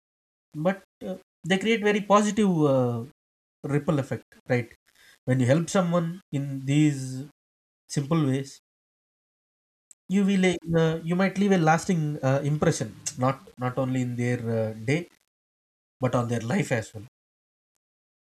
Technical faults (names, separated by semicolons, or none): low bit depth without dither